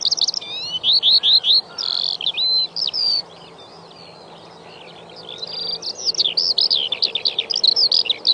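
Nothing stood out on listening to this clip.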